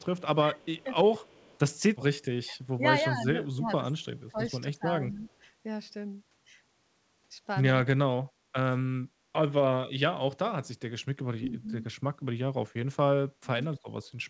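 This speech clip has its talker pushed down in pieces while the other side talks. The level dips at 0.16 to 0.88 s, 2.41 to 2.86 s, 3.13 to 4.40 s, 4.64 to 5.27 s, 11.38 to 11.66 s and 13.41 to 13.64 s. The drops run from about 10 dB to about 30 dB. The longest, near 3.1 to 4.4 s, loses roughly a second of speech. This is speech suppressed in double talk. The echo canceller likely could not tell its own talker from loudspeaker echo, so it turned both down. There is also an echo leak. A very faint delayed copy of the voice, about 230 ms behind, comes through at 0.58 to 0.65 s and 1.24 to 1.59 s. It is most likely sound from a loudspeaker that the far end's canceller failed to remove and sent back. The band stops at 8 kHz, which fits a G.722 call path at 64 kbps.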